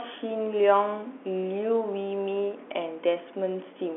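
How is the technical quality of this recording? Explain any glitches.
The technical quality of the recording is sound, with no glitches to explain.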